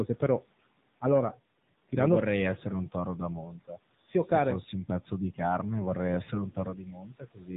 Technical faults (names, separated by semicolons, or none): AMR narrowband mobile codec; speech cut by the noise suppressor